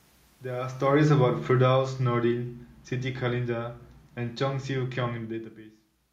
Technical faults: automatic gain falling

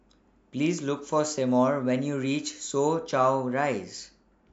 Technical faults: none

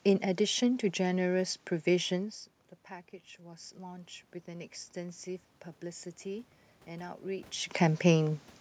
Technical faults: automatic gain rising

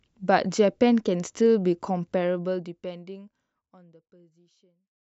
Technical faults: none

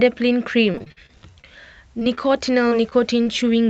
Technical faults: repeated packet loss (robotic sound); short concealed packet loss

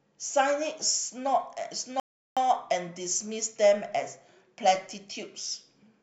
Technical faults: rebuffering stall

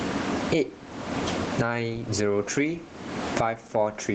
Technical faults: gain pumping

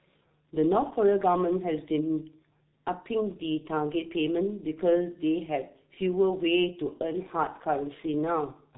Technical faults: G.723.1 codec

